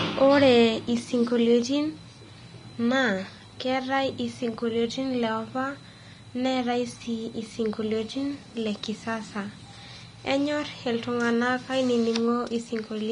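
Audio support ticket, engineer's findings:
Vorbis compression, throughout the speech. Hissy, grainy treble, roughened voiced tones, softened consonant attacks; plainly audible. Nothing above 10.6 kHz. Likely cause: low-rate Vorbis encode, consistent with around 33 kbps. Encoder lowers the cut-off and quantises the remaining high band coarsely, so fine detail turns to noise.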